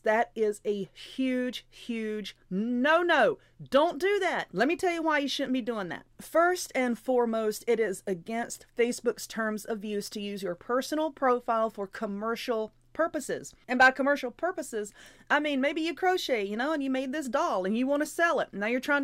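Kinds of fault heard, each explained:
Nothing here points to a technical fault of any kind.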